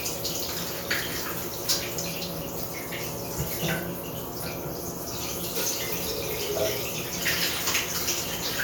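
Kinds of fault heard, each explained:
No technical faults are audible in this recording.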